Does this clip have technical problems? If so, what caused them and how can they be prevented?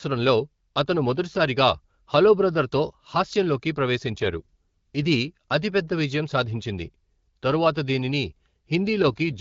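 Yes. From 4.06 to 5.20 s and again from 9.08 to 9.40 s the speech turns rougher and more synthetic with no gap or loss of bandwidth. This is an AMR rate drop: a weak radio link forces the wideband codec down, which fits a step from 12.65 to 8.85 kbit/s. Better signal coverage prevents it.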